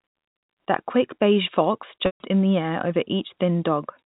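At 2.06 s, right after "quick beige fox", the speech catches on a brief buzzy hold of its last pitch, which dies away into silence before the talker returns with a soft blend on "in the air over" at 2.20 s. This is packet loss with pitch repetition: about 140 ms of audio, which fits seven 20 ms packets, went missing. The receiver looped the final pitch period, faded it over roughly 50 ms, then cross-faded back in. All of this sits within the narrow, sub-4 kHz band of G.711 telephone coding.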